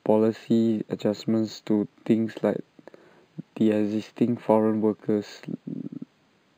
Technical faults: imaging from linear upsampling

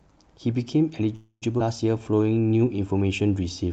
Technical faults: call audio freeze; skip ahead; jitter buffer slow-down

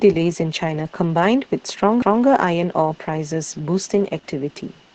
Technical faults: Opus voice compression

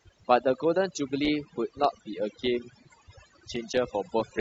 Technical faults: overdone noise removal; adaptive stream at a lower bitrate

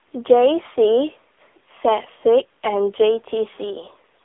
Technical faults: AMR narrowband mobile codec

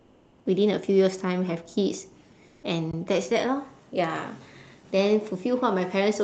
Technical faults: comfort noise in place of the background; underrun with held sample

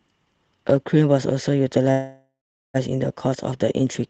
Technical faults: call audio freeze

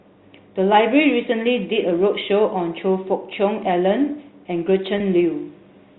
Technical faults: packet loss with pitch repetition

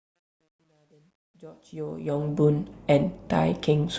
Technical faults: truncation distortion on a fade

